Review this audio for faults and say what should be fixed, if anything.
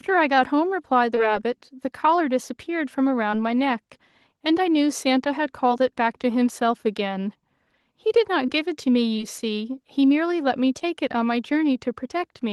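There's short concealed packet loss in this speech at 1.15–1.19 s, 3.31–3.35 s, 5.69–5.72 s, 8.46–8.50 s, 9.16–9.20 s and 10.80–10.83 s. Each gap fits one 20 ms packet arriving too late to play. The decoder covered it by carrying the previous sound forward and then blending back into the real audio, so you hear a quick smear or wobble at each spot. The Opus call path tops out around 12 kHz.

To prevent it, give the jitter buffer more headroom or turn on forward error correction so dropped packets can be rebuilt rather than guessed.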